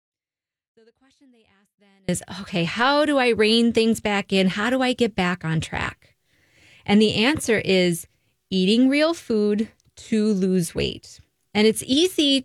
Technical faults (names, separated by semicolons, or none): audio dropout to a faint residue